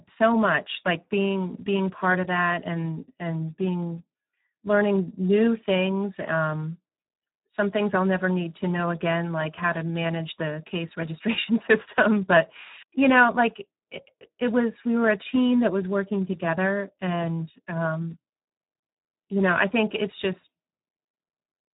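Throughout, the speech sounds hoarse and noisy with nothing above 3.8 kHz: heavy Speex codec damage, consistent with a starved rate around 8 kbps.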